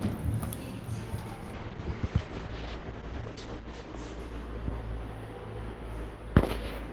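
Everyday sound carrying a call bitrate drop from 1.54 to 5.21 s. The top end narrows from 20 kHz to 8 kHz and the texture turns rough and watery for about 2.35 s at worst, which fits the encoder falling from 32 to 10 kbps. Unlike packet loss, nothing drops out.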